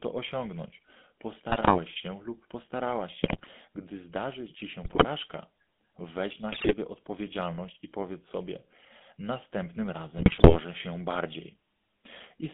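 GSM full-rate codec damage runs through the whole clip. The voice is rebuilt from a vocal-tract model fed by coarsely spaced excitation pulses, giving the speech a plainly audible buzzy, gravelly grain. The band is confined to roughly 200 Hz to 3.6 kHz, which fits a 13 kbps codec.

GSM bit errors strike at 1.48–1.79 s, 3.24–3.49 s, 4.84–5.05 s, 6.52–6.75 s and 10.18–10.60 s. Corrupted filter, pitch and gain parameters reach the decoder, so successive frames come out with warped spectra and jumping levels, breaking the voice into squawks, pops and gargling.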